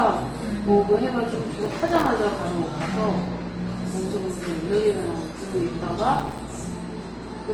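Throughout, nothing is heard above 12 kHz. Smeared, watery artefacts of different characters sit on top of one another. This is likely transcoding between lossy codecs, a chain that fits Opus, then Vorbis, then Opus again, each at around 32 kbit/s.

From 1.65 to 2.09 s, and again from 6.15 to 6.39 s, a gritty processor overload crackle tears through the sound. Buffers of a few milliseconds miss their deadlines, about twenty of them in each burst. Each miss leaves a hard-edged gap of silence.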